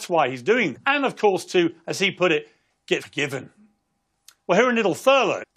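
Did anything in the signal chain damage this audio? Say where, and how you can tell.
Yes: damaged data in a compressed stream, at the codec decoding stage, from 0.76 to 0.78 s just after "why he's doing", at 3.01 s after "he put it get", and from 5.42 to 5.44 s. Each is a brief, roughly 20 ms burst that breaks the speech. Corrupted bytes made the decoder misread those frames and lose sync, so it produced a short glitch before locking onto the next valid frame header.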